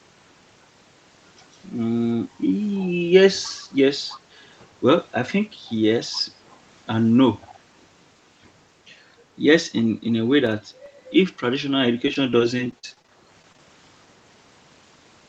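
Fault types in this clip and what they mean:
Echo leak: A faint copy of the speech trails about 311 ms behind near 7.4 to 7.5 s, likely residual loudspeaker pickup slipping past the far side's echo canceller.
Processor overload crackle: A short gritty crackle from 10.47 to 10.86 s, as a handful of very short buffers missed their deadlines and dropped to silence with hard edges.
Repeated packet loss (robotic sound): From 12.06 to 13.59 s the speech turns choppy, as 15 gaps up to 42 ms each were patched by stretching the preceding sound.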